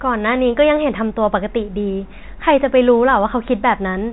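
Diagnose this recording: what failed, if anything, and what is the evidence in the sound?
Nothing in the recording has failed: the speech carries the expected G.711 telephone coding, with the band ending at about 3.8 kHz as that format requires, and no stage in the chain shows a fault.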